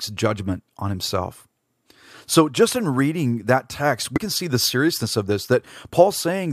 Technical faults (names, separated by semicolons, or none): compressed frames skipped